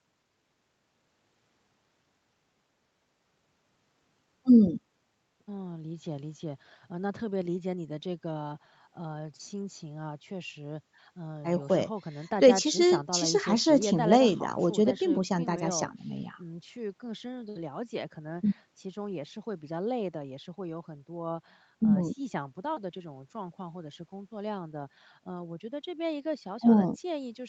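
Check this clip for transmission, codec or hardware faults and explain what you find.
No transmission, codec or hardware faults turn up in the speech, which passes through normal call microphone processing and a WebRTC call path with nothing above 8 kHz, consistent with a wideband Opus setting.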